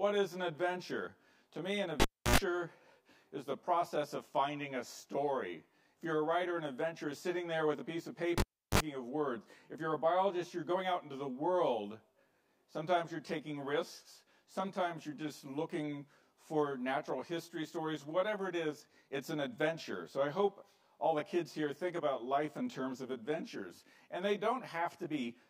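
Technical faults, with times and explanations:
Throughout: channel delay (comb filtering). One channel runs roughly 20 ms behind the other, and summing them to mono cancels shared content at a fixed set of frequencies, starting around 30 Hz and repeating at regular intervals up the spectrum. The result is a steady rough, slightly doubled colour that never moves. That separates it from a flanger or phaser, whose notches sweep, and from a simple dull EQ, which lacks the comb-like regularity.
2.00–2.36 s and 8.38–8.78 s: cable pulled and plugged in. Each event starts with a pop as the live connection breaks. Near silence follows, lasting about 0.31 s in the first case and 0.36 s in the second. Next comes a short burst of mains buzz while only the plug tip makes contact, 76 ms at 60 Hz the first time and 38 ms at 50 Hz the second. A second pop marks the sound's return. The pop, gap, buzz, pop sequence distinguishes it from a plain digital dropout, which goes silent cleanly without hum.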